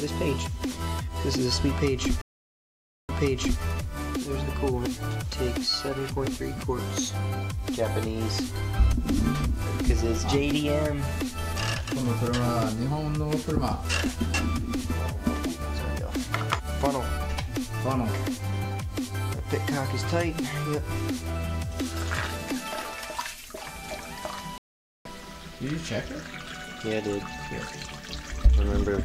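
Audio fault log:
2.21–3.61 s, stream reconnect: the connection drops and the audio goes silent for 875 ms. Playback then resumes 520 ms earlier than where it stopped, so about half a second of sound repeats, as the server resent a burst to the fresh decoder.
24.58–25.08 s, stream reconnect: a 473 ms silence, after which the audio picks up about half a second later, so that stretch of sound is lost, as with a live stream that moved on while the player reconnected.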